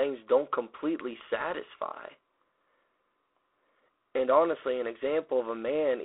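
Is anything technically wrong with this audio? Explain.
Yes. For the whole clip, the speech has passed through G.726 ADPCM coding at a reduced bit depth, which fits the 24 kbit/s mode. The coder sends only a few bits per sample describing how each sample differs from an adaptive prediction, so quantisation error rides on the signal and grows with it. The result is a harsh, rasping hiss that swells with the speech's loudness, inside a narrow telephone band of roughly 300 Hz to 3.4 kHz, with nothing above 3.8 kHz.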